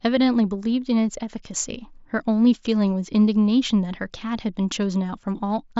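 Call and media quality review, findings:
No faults found in the speech; the band stops near 7.7 kHz with only slight graininess on louder passages, which fits a normal wideband Bluetooth headset link running mSBC at about 61 kbps.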